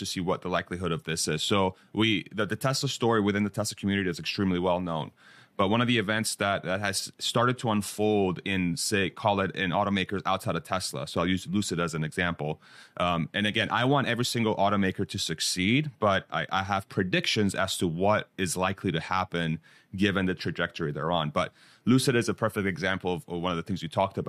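No technical faults can be heard anywhere in this speech recording. Nothing breaks, drops out or changes character at any point along the way.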